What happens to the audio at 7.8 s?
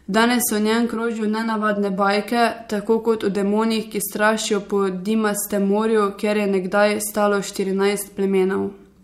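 Nothing goes wrong at 7.8 s; the speech carries on intact through that moment, with no dropout, click, glitch or other fault.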